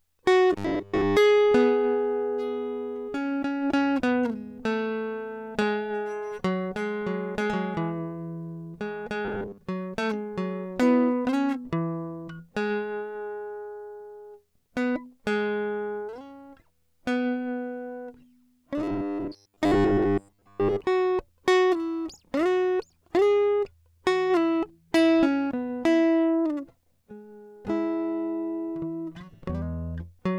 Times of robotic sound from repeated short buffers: 0.53-1.17, 9.25-9.58, 18.78-20.81

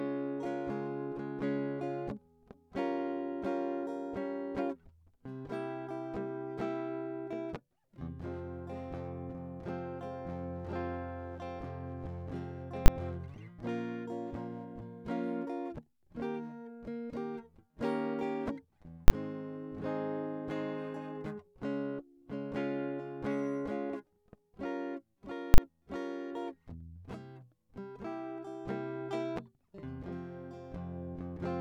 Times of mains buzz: none

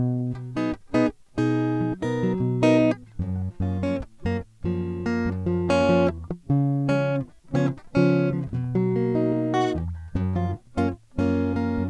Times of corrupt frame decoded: none

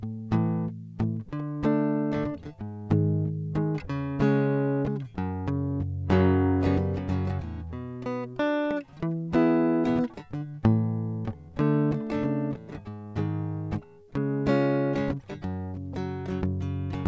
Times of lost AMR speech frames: none

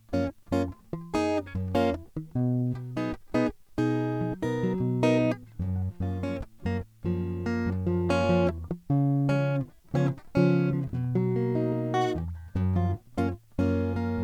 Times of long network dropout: none

